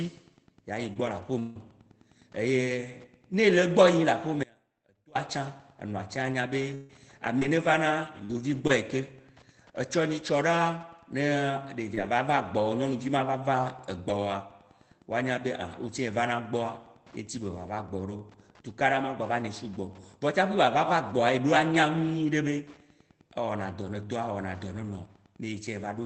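At 0.93 to 0.97 s there is a short concealed packet loss: about 20 ms never arrived, and the decoder stretched the preceding sound across the hole, leaving a brief smear rather than a silence. The same thing happens again at 11.95 to 11.99 s.

Lost packets rebuilt from error correction follow at 0.95, 1.05 and 1.55 s, and later at 11.97, 12.05 and 12.19 s. Each is a single 20 ms frame played from a low-bitrate backup copy. Instead of a smear, these frames turn briefly rougher and noisier. The band on this Opus call path reaches about 8 kHz.

From 1.39 to 1.57 s, about 160 ms drops out, likely from a long network dropout. The hole is filled with a fading continuation of the last sound that never quite reaches silence. It differs from the short losses by lasting far longer.

Between 4.44 and 5.15 s the speech cuts abruptly to a faint residue about 25 dB below its normal level. This is likely an audio dropout in which the path stayed live. 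The sudden edges set it apart from a natural pause.

From 6.33 to 8.71 s, repeated packet loss gives choppy, robotic speech. There are four separate gaps, the longest 141 ms, and patching covers roughly a tenth of the span.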